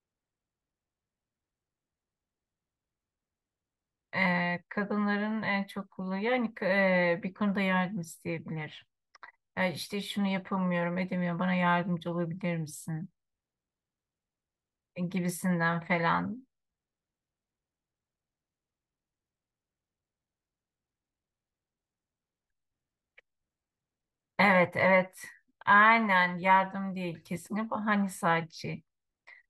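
No technical faults are audible.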